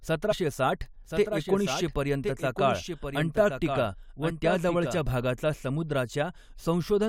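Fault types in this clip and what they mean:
Damaged data in a compressed stream: corrupted frames make the decoder lose sync near 0.31 s, giving a short glitch that shows as a brief disruption in the spectrogram.
Doubled audio track: a full-band copy about 5 dB quieter trails roughly a second behind, likely from a second capture path, showing as abruptly starting, time-shifted duplicate spectrogram patterns.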